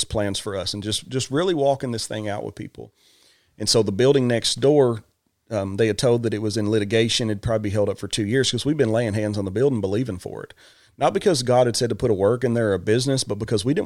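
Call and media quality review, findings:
No audible faults found in the speech recording; no action required.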